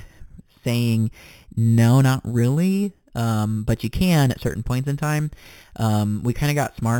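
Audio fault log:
throughout imaging from sample-and-hold upsampling: samples were repeated unfiltered, apparently from an 8 kHz-rate source, mirroring the speech into 4 to 8 kHz, about 20 dB down, as metallic fizz.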